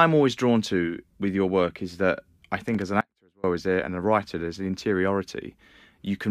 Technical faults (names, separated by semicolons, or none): loose connector crackle; audio dropout to a faint residue